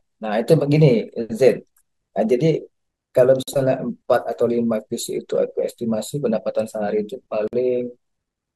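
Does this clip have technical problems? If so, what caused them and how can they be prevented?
Yes. The speech has a gap at a join of encoded pieces at 3.43 to 3.48 s and again at 7.48 to 7.53 s. Each gap is about 50 ms long, with edges smeared by the codec. The gaps fall 4 s apart, which points to the audio having been encoded in 4-second pieces and spliced. The encoder's start-up delay and last-frame padding were left in at each join. Trimming that delay and padding, or encoding gaplessly, prevents it.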